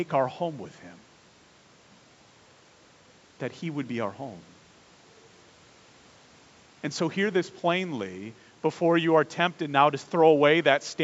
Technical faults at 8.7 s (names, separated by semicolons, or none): none